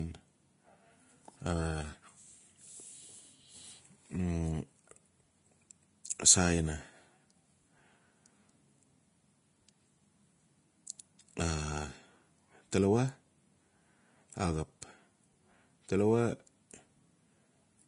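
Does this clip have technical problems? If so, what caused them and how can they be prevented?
Yes. Throughout, the speech sounds dull, with nothing above 10.6 kHz. This is likely low-bitrate audio saved at a high bitrate: the MP3 preserves an earlier encoding's losses. To prevent it, encode from the original uncompressed source.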